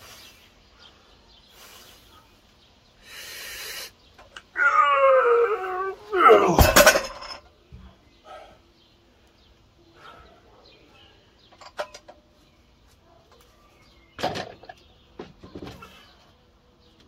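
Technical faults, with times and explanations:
5.57–5.59 s and 15.58–15.65 s, repeated frames: The audio briefly stutters as a short stretch plays twice in a row. At 5.57 s a 23.2 ms block repeats, which fits one compressed frame being sent twice. At 15.58 s a 69.7 ms block repeats, which fits a run of three frames. Each block plays one extra time. The decoder takes the copy as new audio, so the sound jumps back and continues. The clip grows by 92.9 ms in total.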